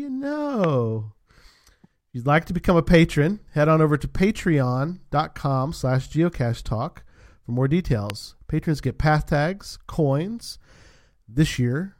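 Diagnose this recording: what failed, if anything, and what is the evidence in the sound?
Two sharp single pops stand out well above the speech, the first at 0.64 to 0.66 s and the second at 8.10 to 8.12 s, just after "slash geocachetalk for more". Each peaks roughly 15 dB over the speech, which carries on underneath. This is a loud pop, most likely from the analogue wiring stage: a brief voltage step from a connector, switch or static discharge entered the signal path and was shaped by the following circuitry.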